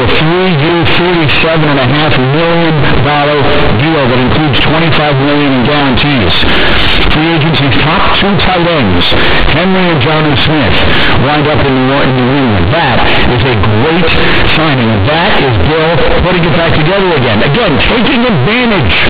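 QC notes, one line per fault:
throughout: companded audio read as linear, mu-law bytes played as 8-bit samples unexpanded, so quiet parts blare like peaks; unlike clipping, pauses roar too.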